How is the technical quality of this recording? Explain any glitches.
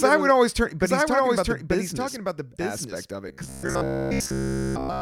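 The recording has two clear problems: a doubled track that runs the whole way through, and a robotic buzz over the final stretch.

Doubled audio track: throughout the clip, every bit of speech is heard a second time roughly a second later, only a few dB quieter than the original. The echo has no decay or room colour; it is a dry, full-band copy that cuts in and out abruptly. The likely cause is the same signal being captured twice, once through a slower path, so the two copies are mixed out of step.

Robotic sound from repeated short buffers: from 3.29 s to 5.01 s, just after "about the business aspect", the speech turns into a rigid, metallic buzz pitched at 66.7 Hz that only loosely follows the words. The likely cause is new audio arriving too seldom, so the software keeps replaying the last 15 ms chunk. That period fixes the buzz pitch, and most of the real audio in that span is skipped.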